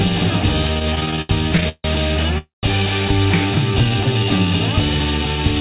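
From 0.74 to 1.86 s the audio has repeated stalls, a stutter. Fourteen short gaps break up the flow. The longest lasts 153 ms. About a third of that stretch, 382 ms in all, is filled with stretched-out sound. Packets were arriving late, so the jitter buffer kept running dry. Each time, the receiver held the last sound, fading it in the longer waits. Nothing is lost. The audio drags and stumbles.

At 2.38 s there is a call audio freeze lasting until 2.65 s. The last sound hangs on and fades, then drops into about 150 ms of silence. The audio then picks up exactly where it stopped. In total 248 ms has been inserted and nothing is missing. The likely cause is packets held up in transit, emptying the jitter buffer until they arrived.

From 3.71 to 4.46 s comes a jitter buffer slow-down. The buffer was building up its reserve. It did this by repeating single pitch periods and bits of pauses, adding 109 ms. 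Playback runs at about 86 percent speed. The pitch does not change, but sounds are drawn out. Throughout, nothing is heard above 4 kHz, which fits G.711 A-law at 64 kbps.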